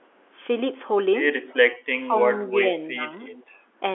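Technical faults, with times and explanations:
1.98–2.73 s and 2.93–3.00 s, speech suppressed in double talk: This likely happened because both ends were talking at once and the echo canceller could not tell the near talker apart from loudspeaker echo, so it turned everything down. In the first stretch the speech sinks by around 20 dB in patches adding up to about half a second. It then dips again more briefly, by around 10 dB for roughly 70 ms, so the voice thins and partly drops away.
3.31–3.44 s, echo leak: This is likely the far end playing the call over a loudspeaker, with its echo canceller letting part of the microphone pickup through and sending it back. A faint repeat of the talker arrives 343 ms behind the original, at about 20 dB below the speech. It lasts only a brief scrap, heard as a ghostly doubling in the G.711 phone band, which stops short of 4 kHz.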